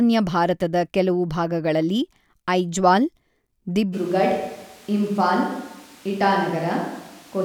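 A switch to a distant microphone at 3.95 s lasts to the end. The speech abruptly turns roomy and hollow, thinner in the bass and about 5 dB quieter, with room noise some 25 dB below it, likely because the close microphone's signal was lost and a farther one took over.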